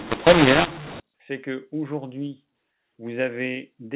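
From 0.0 to 1.0 s, mu-law and A-law are mixed up: A-law telephone audio is decoded as mu-law. Sample levels are scrambled, some too large and others too small, and the quietest samples rise well above silence, so the speech distorts and pauses fill with noise.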